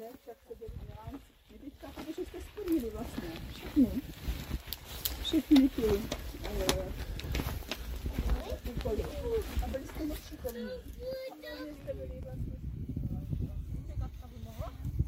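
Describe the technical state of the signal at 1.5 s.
At 1.5 s the signal is intact, with no audible dropout, distortion or other fault.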